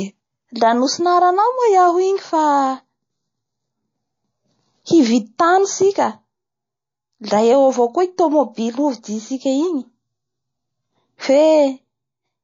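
From start to finish, the speech carries plainly audible coding damage, likely MP3 compression, fitting a bitrate near 32 kbps. Quiet detail flickers between frames. S sounds turn swirly and metallic. Consonant attacks smear.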